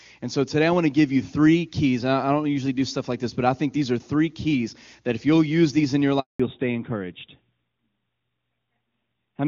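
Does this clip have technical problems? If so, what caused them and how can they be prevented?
Yes. A handover gap runs from 6.20 to 6.40 s, right after "use these in your": the speech fades out within a few tens of milliseconds and stays silent for 200 ms while the call moves to another network, and whatever was said in that span is lost. Unlike an ordinary packet-loss dropout, it isn't patched with smeared or repeated sound, and it marks the exact point where the audio bandwidth changes. Make-before-break handover, or buffering speech frames across the switch, would prevent it.

A fallback to narrowband follows from 6.40 s to the end. Before the gap, the HD Voice path sounds clear and full, which fits AMR-WB running near its top rate of 23.85 kbit/s. Afterwards, nothing remains above 4 kHz, consistent with a switch to AMR-NB at 12.2 kbit/s, and the sound turns duller and flatter. This differs from a low-rate wideband mode, which keeps its upper band but sounds rough and raspy. 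Here the top band is simply gone. Ensuring the target network supports AMR-WB end to end would keep the call in wideband.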